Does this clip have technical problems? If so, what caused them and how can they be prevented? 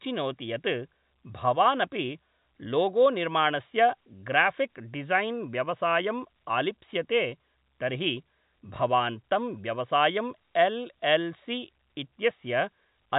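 No, nothing in this speech recording stood out as a technical problem on listening.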